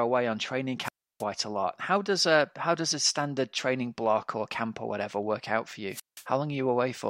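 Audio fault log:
0.82–1.24 s and 5.90–6.25 s, wireless microphone squelch dropout: each event has a brief surge of hiss, then a hole of near silence, about 320 ms in the first and about 175 ms in the second, before the speech returns. The analogue FM radio link weakened until the noise rose above the signal, and the receiver's squelch then muted its output to block the static. The sound came back once the signal recovered.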